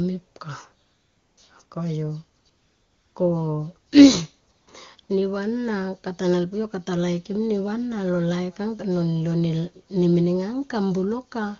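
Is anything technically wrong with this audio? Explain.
Yes. AMR comfort noise fills six pauses: 0.85 to 1.37 s, 1.65 to 1.71 s, 2.41 to 2.45 s, 2.49 to 3.15 s, 4.51 to 4.67 s and 5.03 to 5.09 s. The phone judged the talker silent and stopped sending speech. The receiver then generated smooth, steady noise from a rough level estimate. This noise switches in and out against the real background. The wideband codec itself is clean.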